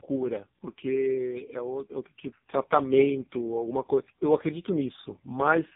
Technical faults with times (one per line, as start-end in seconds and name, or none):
0.00-5.75 tandem speech coding